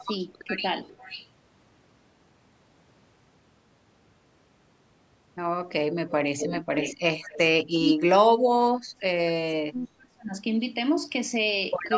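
Right at 0 to 0.1 s, and again at 0.51 to 0.56 s, the speech briefly dips, clearly at first and then only slightly. That's likely speech suppressed in double talk, where the canceller turns both its own talker and the loudspeaker echo down while both sides are talking. Next comes echo leak: a faint, delayed copy of the voice arriving about half a second late. It shows up from 0.85 to 1.28 s, at 6.07 to 6.11 s, and at 7.22 to 7.38 s. In between, from 6.38 to 6.95 s, it's much louder. That's likely loudspeaker pickup slipping past the echo canceller. Then the suppression comes back hard. From 7.59 to 9.34 s and from 9.63 to 10.35 s the speech sinks deeply or drops out in pieces.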